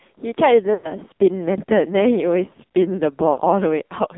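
AMR narrowband mobile codec damage runs through the whole of this speech clip. The line is confined to roughly 200 Hz to 3.7 kHz, with nothing above it. The coder rebuilds the voice from a vocal-tract filter excited by sparse pulses, and the damage is heavy: the speech sounds buzzy and synthetic, which points to a low AMR-NB mode near 5.9 kbps. Lost AMR speech frames appear from 0.74 to 0.97 s and again from 3.32 to 3.40 s. Frames failed their radio checksum, so the decoder repeated the last good pitch and filter settings at falling gain. At the first gap, about 100 ms of audio is missing, which fits five 20 ms frames, and the sound smears and fades toward silence before returning weak or rough. The second gap is about 60 ms, which fits three frames, and produces a shorter, drawn-out fade.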